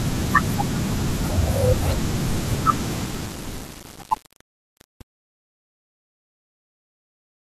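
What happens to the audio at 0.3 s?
Nothing goes wrong at 0.3 s: the speech there is intact, with no break or disturbance.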